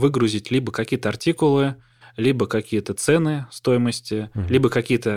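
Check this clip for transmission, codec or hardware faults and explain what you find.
One hardware fault is present. Sample clock jitter runs throughout. The converter clock wavers by about a microsecond, mistiming samples. This adds faint roughness, roughly 45 dB down, strongest on loud, bright speech.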